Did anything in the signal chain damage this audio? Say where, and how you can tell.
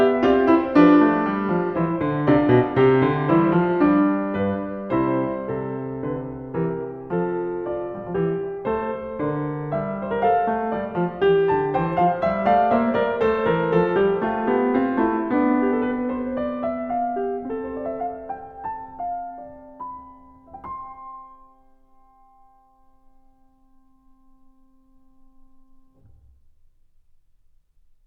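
No, nothing in the signal chain damaged this music.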